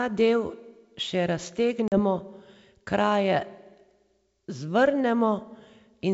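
At 1.88 to 1.99 s, packet loss on an ADPCM call leaves a hard 40 ms hole. Unlike a clean dropout, the resumed speech briefly sounds wrong while the decoder's predictor resynchronises.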